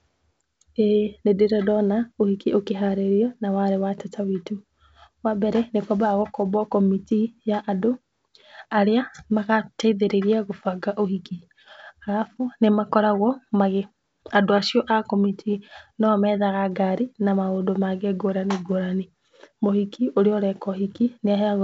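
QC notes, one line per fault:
No faults heard.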